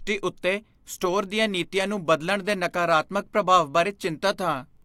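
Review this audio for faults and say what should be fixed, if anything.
Word clock ticks run through this speech from 0.43 s to 4.77 s: around seven sharp ticks of uneven strength, roughly one per second. The receiving device is running on its own clock rather than locking to the sender's. The two drift apart by a few tens of ppm, and at each slip one sample is dropped or repeated. The steady, near-metronomic spacing sets this apart from buffer underrun clicks or dropouts, which land irregularly and usually leave audible gaps. To prevent it, slave the receiver to the incoming digital signal or to a shared master word clock.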